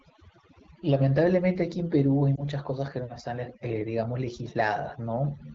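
A noise reduction stage set far too aggressively runs through the whole speech clip, which is overdone noise removal. It pushes frequency bands down or off wherever they sit close to its noise estimate, so the background becomes near silence dotted with twinkling specks, and quieter parts of the voice are stripped away.

From 2.36 to 2.46 s, lost AMR speech frames show up as a brief dip or warble. The wideband decoder, whose light coding sits in the background as AMR-WB normally would, had to stand in for missing data by reusing its last good pitch and vocal tract settings at reduced gain. The short gap fits a single lost 20 ms frame, and the voice returns weak for a moment.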